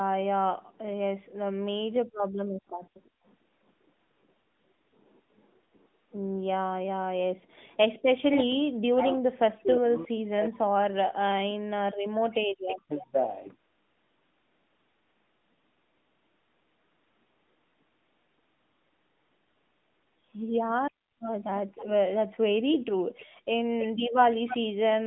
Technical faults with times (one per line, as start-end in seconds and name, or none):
0.00-25.06 AMR narrowband mobile codec
2.07-3.23 background gated by the echo canceller
8.12-13.15 speech suppressed in double talk
12.69-13.03 echo leak
20.98-21.02 background gated by the echo canceller